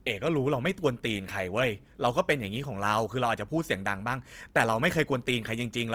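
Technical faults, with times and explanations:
Throughout, Opus compression: the speech has a grainy, rough texture. This is likely a low-rate Opus stream in its music (CELT) mode, around 24 kbps. The encoder keeps each band's energy but refills starved bands with folded or noise-like content, so detail turns granular instead of vanishing. That sets it apart from MP3-style damage: less swirling and fewer watery holes, and the top end still reaches about 20.3 kHz rather than being cut away.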